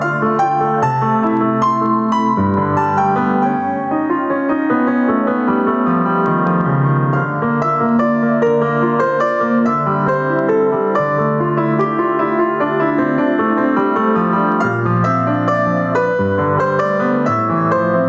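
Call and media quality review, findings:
Gain pumping throughout: gain swings around 10 dB with loud sounds; likely excess gain into fast limiter. Unlike gating, floor persists.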